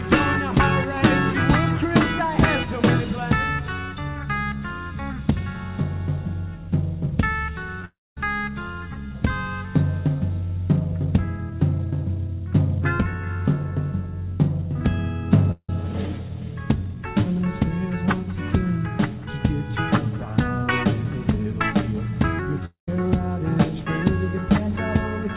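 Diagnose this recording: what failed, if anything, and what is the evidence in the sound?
The network stage caused short concealed packet loss at 7.80 s and 7.82 s. Two back-to-back 10 ms gaps were each patched by extending the preceding waveform, producing a tiny smear or wobble on audio already band-limited to 4 kHz by the G.711 mu-law call codec.

Long network dropouts occur from 7.85 to 8.17 s, 15.51 to 15.69 s and 22.65 to 22.88 s. Each starts as a fading buzz or hiss, then falls to silence (about 230, 70 and 130 ms), and the audio resumes later with material missing. The likely cause is packets arriving too late or not at all.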